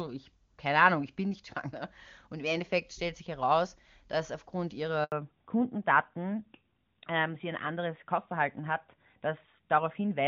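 At 5.04 s, right after "sich heraus dass aufgrund", a handover gap cuts the speech. The call switched networks and no speech frames arrived during the move. The voice fades within milliseconds and stays silent for 80 ms, until 5.12 s. Anything spoken then is lost.

From 5.12 s to the end, a fallback to narrowband takes over. Before this, the clear HD Voice sound fits AMR-WB at a high rate. The call then drops to an older narrowband codec, sounding like AMR-NB at 12.2 kbit/s. Nothing above 4 kHz remains. The speech turns duller and rougher.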